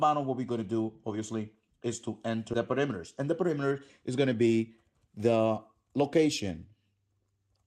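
At 2.53 to 2.55 s there's a skip ahead: around 0.4 s of audio just vanishes, likely dropped when the jitter buffer overflowed, so playback jumps forward with no gap. Then from 2.71 to 4.41 s the jitter buffer speed-up kicks in, trimming tiny pitch-period slices, about 150 ms in total, so the sound runs about 7% fast at unchanged pitch, all over a call path whose roll-off near 12 kHz fits Opus.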